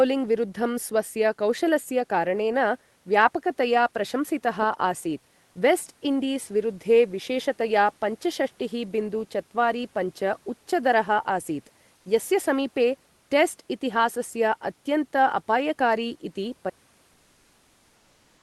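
At 11.97 s, for about 80 ms just before "यस्य समीपे", the room background turns into comfort noise in place of the background: the textured room tone, about 40 dB under the speech, becomes a flat, featureless hiss roughly 2 dB quieter. This is likely discontinuous transmission in Opus, with the receiver synthesising filler noise while the sender goes quiet. Unlike a dropout, the gap is never truly silent. A smooth, slightly lowered noise bed stands in for the real one.

From 16.70 s to the end, the sound suffers an audio dropout to silence: everything, room tone included, stops dead and stays silent. The likely cause is an input lost mid-recording while writing continued. What separates this from the comfort-noise patch is the absence of any noise at all. There is no synthetic hiss and no gradual fade, only a hard cut to empty silence that never recovers.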